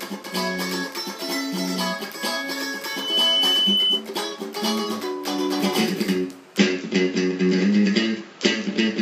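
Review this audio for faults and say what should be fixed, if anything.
There's a loudspeaker feedback squeal from 2.84 to 4.05 s. The mic is catching the speaker it feeds, and at 3 kHz the loop gain tops one, so that tone swells up over about a third of a second and ends up around 5 dB louder than the audio. Fix it by dropping monitor gain, moving the mic off-axis from the speaker, or notching 3 kHz.

At 6.57 s, running to the end, the sound turns dull: nothing above 7.6 kHz, the level shifts by about 5 dB, and a new noise floor appears roughly 45 dB down, with no gap at the change. That's likely the input switching to a poorer device. Lock the recording input so the system can't switch devices mid-take.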